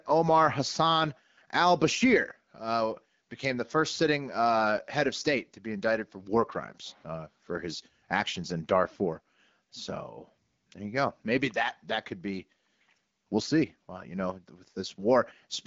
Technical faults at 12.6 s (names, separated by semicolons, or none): none